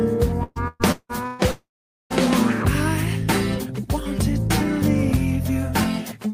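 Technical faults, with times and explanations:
0.43–1.42 s, repeated packet loss (robotic sound): the audio breaks up through four separate holes totalling about 540 ms, the longest about 176 ms. Each hole is bridged by stretching the preceding sound, so roughly half of this span is synthetic fill rather than real signal. The rapid alternation of genuine and repeated fragments gives a choppy, robotic texture, and pieces of the sound are simply absent.
1.51–2.13 s, long network dropout: about 600 ms of audio never plays. The last sound first continues as a decaying buzz or hiss, then roughly 460 ms of near-silence follows before the signal returns further along, with the intervening material gone. This pattern is likely caused by an extended gap in packet arrival, too long for the receiver to conceal with extrapolation alone, so it falls back to silence until data resumes.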